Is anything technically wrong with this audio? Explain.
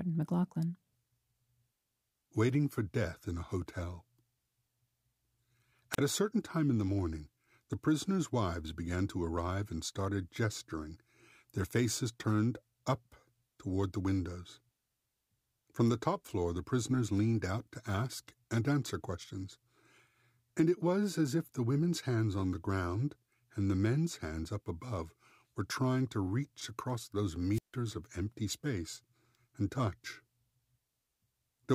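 Yes. Two wireless microphone squelch dropouts interrupt the speech. The first runs from 5.92 to 5.98 s, just before "a certain time in", with a mute of about 36 ms. The second runs from 27.52 to 27.76 s, between "to reach across those" and "of empty space and", muting for about 154 ms. Each time, the radio signal from an analogue FM transmitter weakens until the receiver's squelch gate closes. The sound is a quick swell of hiss, then a gap of near silence, then the speech resumes. That rising static before the hole is what separates it from a plain digital dropout, which cuts to silence abruptly without a noise build.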